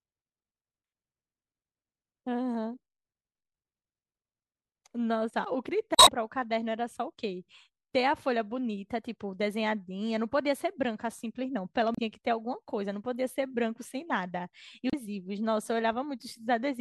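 Damaged data in the compressed stream breaks the speech at 5.95–6.09 s, 11.95–11.99 s and 14.90–14.94 s. Corrupted bytes make the decoder misread those frames and lose sync until it finds the next frame header, leaving brief squawky chirps and blips.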